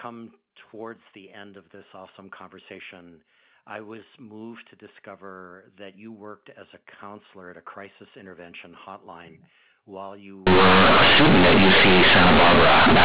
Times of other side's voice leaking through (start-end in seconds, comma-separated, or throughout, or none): none